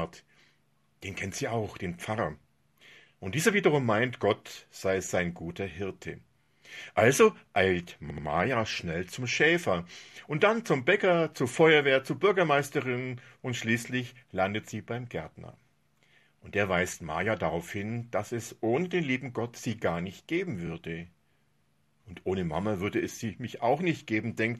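Repeated frames occur at 6.43 to 6.48 s, 8.10 to 8.26 s and 20.67 to 20.69 s. A short block of compressed audio was delivered more than once, so the decoder played the same slice again. At 6.43 s a 26 ms block, consistent with a single frame, plays twice more. At 8.10 s a 78 ms block, pointing to three frames, also repeats twice. At 20.67 s a 26 ms block repeats once. Each is heard as a brief stutter, and each adds the repeated time to the clip.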